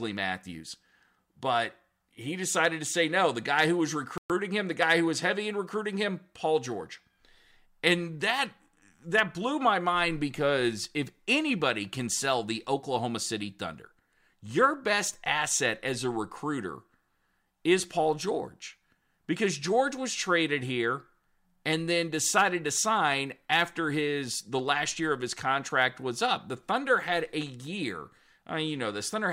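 At 4.18 s the player likely ran short of buffered data, or its output thread was held up, so nothing reached the output until it caught up. The result is a playback stall: the speech cuts to dead silence for 120 ms, ending at 4.30 s, then resumes. The gap lands mid-flow rather than at a natural pause, so it reads as a brief hiccup that breaks the rhythm of the speech.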